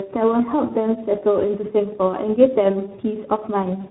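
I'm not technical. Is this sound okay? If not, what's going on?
No. Throughout the speech there is overlap-add ripple: the audio was chopped into long overlapping pieces and rejoined unevenly, so the loudness pulses about seven times a second. That gives a fast flutter.

There is also tandem speech coding. The call passed through two different speech compressors in a row, the second re-squeezing the first one's damaged output. The result is rougher, muffled, warbly speech, with nothing above about 3.9 kHz, so it lacks crispness.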